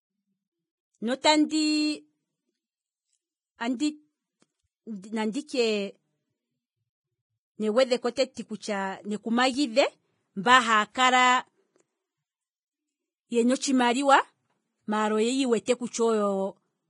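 Heavy lossy coding, likely Vorbis compression at a low bitrate around 20 kbps, runs throughout the speech. Nothing is left above 10.6 kHz, and the remaining treble is quantised so coarsely that its detail turns into hiss, leaving the speech grainy, dull and rough.

Pre-echo occurs where a sharp onset lands late in a transform block and the block's quantisation noise spreads into the quiet moment before it. A brief hiss precedes the attack from 1.21 to 1.24 s, at 8.15 s just before "kutya neku", and from 15.65 to 15.68 s, each time smearing the onset.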